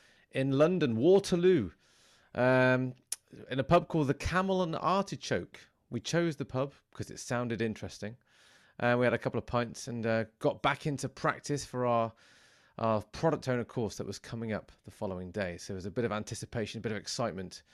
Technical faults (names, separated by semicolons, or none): none